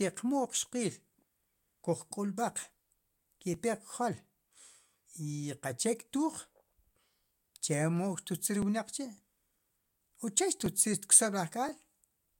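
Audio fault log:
0.47 to 11.69 s, periodic USB or driver dropouts: about 2 ms skipped every 1.02 s gives regular ticks during speech, seen as evenly spaced waveform discontinuities and thin vertical spectrogram lines.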